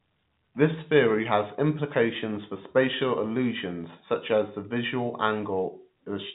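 No technical faults can be heard in this speech; it carries the narrow telephone band of G.711 coding, with nothing above about 3.8 kHz and only faint quantisation noise riding under the voice, as expected from a 64 kbps A-law line.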